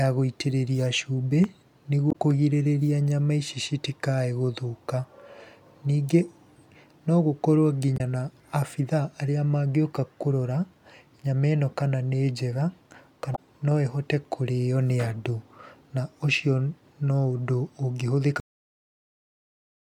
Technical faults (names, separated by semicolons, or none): damaged data in a compressed stream; cut-off end